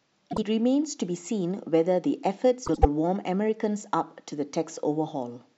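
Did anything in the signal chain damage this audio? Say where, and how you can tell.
Yes, frames out of order at the network-to-codec stage. Around 0.31 to 0.44 s and 2.66 to 2.85 s the speech flutters. Adjacent blocks of about 52 and 78 ms swapped places, which fits two- and three-frame runs of roughly 26 ms frames.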